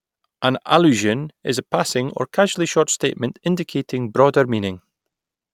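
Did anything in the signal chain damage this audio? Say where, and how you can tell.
No, nothing in this speech stood out on listening as damage from any stage of the signal chain.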